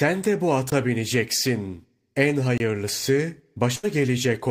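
At 0.70 s, just after "de bu", a block of digital silence lasting about 18 ms cuts the speech abruptly. At 2.58 to 2.60 s, a 23 ms dropout, which fits an unfilled 1024-sample buffer, does the same.

From 3.75 to 3.85 s, a burst of packet loss occurs. The last sound is held and fades for 77 ms, then speech resumes with about 80 ms missing.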